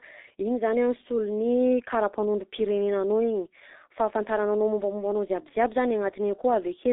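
Speech runs through a G.723.1 codec for its full length. Nothing survives above 3.8 kHz, and the band sits between 250 Hz and 3.7 kHz. Damage is heavy: muffled, hoarse tone and smeared consonants, which fits a bitrate near 6.3 kbit/s.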